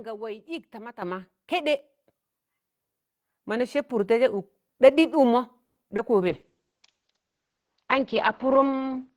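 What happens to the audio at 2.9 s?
Nothing goes wrong at 2.9 s: the speech carries on intact through that moment with no audible fault.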